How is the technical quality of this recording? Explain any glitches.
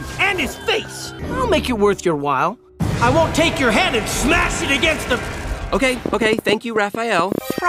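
One glitch stands out: a train of clicks from 6.06 to 7.59 s. About fifteen similar pops arrive unevenly, at roughly 10.5 per second, peaking around 15 dB above the sound. The likely cause is nearby interference or a faulty connection or power supply. Their matching shape sets them apart from random crackle.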